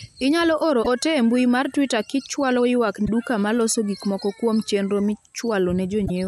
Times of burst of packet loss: none

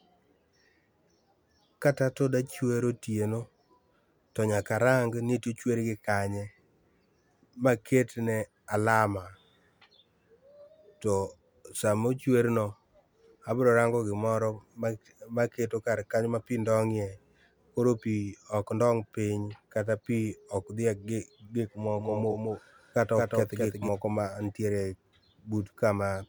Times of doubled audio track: 21.97-23.89

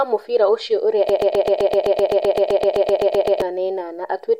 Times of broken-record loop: 1.09-3.42

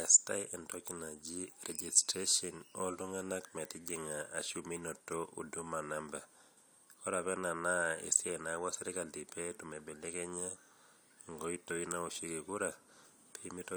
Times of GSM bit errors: none

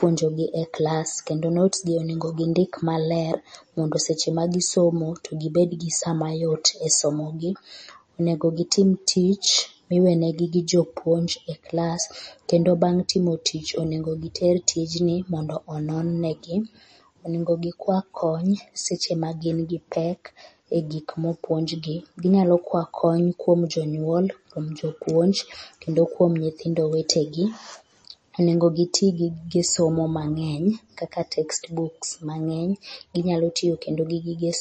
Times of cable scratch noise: none

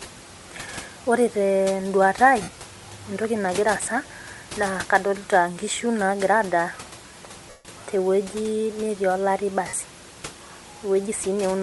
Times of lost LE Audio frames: 2.42-2.48, 7.50-7.65, 9.68-9.73

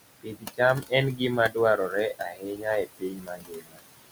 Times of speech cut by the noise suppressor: 0.21-0.60, 2.19-3.81

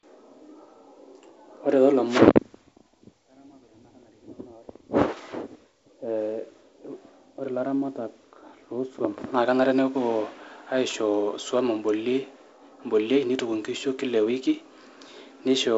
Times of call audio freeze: none

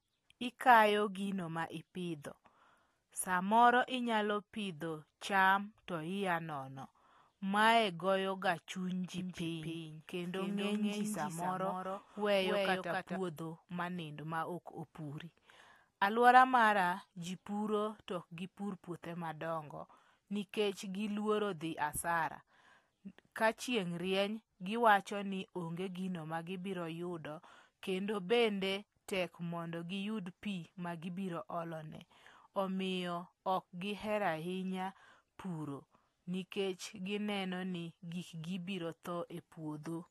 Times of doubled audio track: 9.18-13.16

